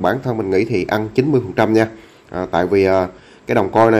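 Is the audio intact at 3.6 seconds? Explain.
No. Hard clipping runs from about 3.57 s to 3.99 s, so 3.6 s falls inside it. Over that last stretch the signal is pushed roughly 3 dB beyond what the stage can pass, and every peak above the limit is sliced off flat. Those squared-off tops add harmonics high in the spectrum. With an overload this modest, it is heard as a gritty crackle riding on the louder peaks rather than a constant harsh fuzz.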